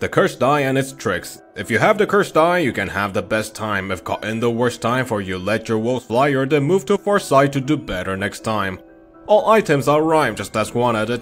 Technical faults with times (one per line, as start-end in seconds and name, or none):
none